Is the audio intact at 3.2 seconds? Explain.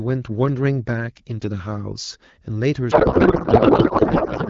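No. At 3.2 seconds the clip is inside a codec payload misread that runs from 2.91 s to the end at 4.50 s. Before it, the wideband speech is clear. Here the decoder reads the bits with every field shifted out of place. This fits octet-aligned AMR frames being read as bandwidth-efficient ones. The frames still look valid, so decoding continues. The speech turns into garbled noise and warble that barely follows it.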